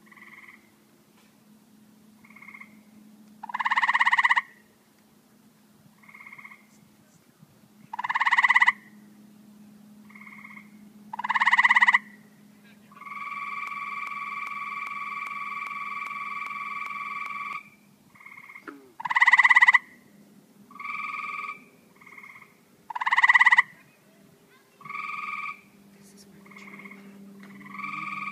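A stalled player, encoder or stream likely kept resending its last buffered fragment, producing a broken-record loop from 13.67 to 17.53 s. A 0.4-second piece repeats exactly, back to back, ten times, and the audio that belonged in that stretch never plays.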